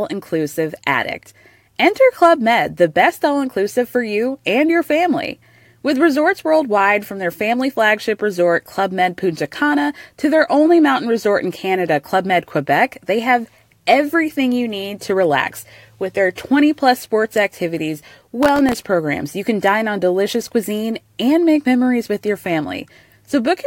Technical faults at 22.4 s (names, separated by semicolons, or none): none